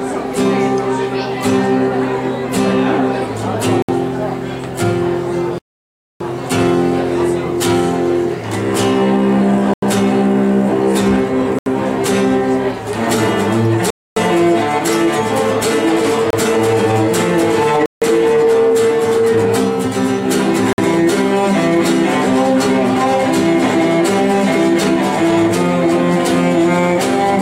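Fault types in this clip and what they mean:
Bluetooth stall: the sound cuts to dead silence and then carries on, eight times between about 3.8 and 20.7 s, with gaps from under 30 ms up to 0.62 s at 5.58 s. Likely cause: interference delayed packets and emptied the headphones' buffer.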